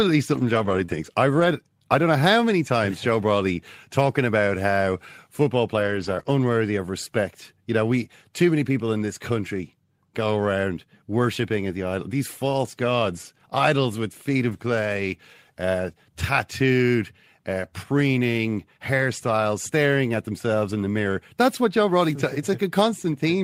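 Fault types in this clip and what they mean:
Lost packet rebuilt from error correction: dropped packets get replaced by the rough low-bitrate copy riding in the next packet, so no gap, just noisier speech around 0.33–0.83 s, 5.75–6.21 s and 14.49–14.55 s.
Short concealed packet loss: a few hundredths of a second arrived too late, so the decoder stretched the previous sound and blended back, giving brief smears at 0.85–0.90 s and 6.23–6.26 s.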